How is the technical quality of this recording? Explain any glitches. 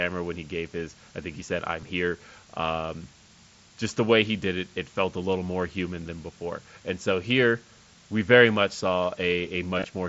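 The recording has a constant hiss from start to finish and two brief dropouts that the headset link covered up, one near the start and one right at the end.

The hiss is low bit depth with dither. The signal was rounded to very few levels, and noise was added first so the rounding error spreads into a smooth, even hiss instead of gritty distortion. What you hear is a flat, steady wash about 25 dB below the speech, which fits something like an 8-bit signal. It sits under the talking the whole time, and the speech itself doesn't sound crunchy.

The glitches are concealed Bluetooth headset packet loss. The first is at 1.81 s, a tiny gap of two lost frames, about 15 ms. The second runs from about 9.78 to 9.85 s, with several small losses scattered over 60 ms, the longest about 22 ms. Each time a packet went missing, the receiver filled the hole by repeating the best-matching slice of the last 20 ms or so. 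That late cluster comes across as a short buzzy, held tone with a slight warble when the real audio picks back up. The pattern points to around five lost frames there. All of this travelled over the mSBC wideband headset codec, which accounts for the speech topping out around 8 kHz.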